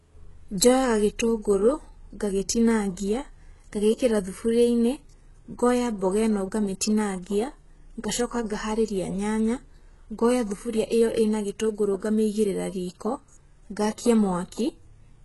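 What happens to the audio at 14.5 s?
At 14.5 s the speech carries the same heavy damage heard across the whole clip, likely from HE-AAC compression at a very low bitrate. Treble is rebuilt from copied lower bands, so sibilants sound gritty and lispy. A spectrogram shows a blocky upper region and nothing above 11.5 kHz.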